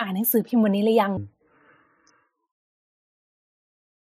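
At 1.17 s the speech drops into a section at the wrong speed, running at 0.55 times normal through to the end at 4.07 s. Pitch falls by roughly ten semitones, so it turns deep and dragging, likely from playback against the wrong clock.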